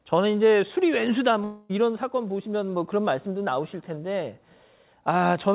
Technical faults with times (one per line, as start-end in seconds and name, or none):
1.44-1.71 long network dropout